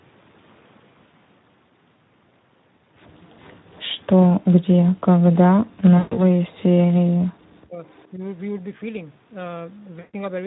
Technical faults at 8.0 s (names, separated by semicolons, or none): Speex codec; echo leak